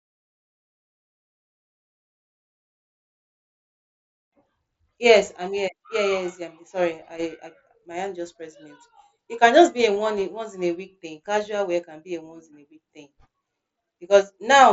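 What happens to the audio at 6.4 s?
Nothing goes wrong at 6.4 s: the audio is intact there, carried through the Bluetooth mSBC headset path with no fault at that moment.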